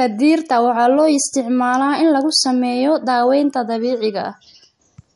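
Running the whole way through, the speech has likely been squeezed by MP3 compression at a low bitrate, with the damage plainly audible, which fits a rate around 48 kbps. Starved of bits, the encoder has cut the treble at 11.2 kHz and let weak frequency lines switch on and off from frame to frame. Nothing sits above 11.2 kHz, so the speech sounds dulled, and its fine detail comes across watery and swirly, with smeared consonant attacks.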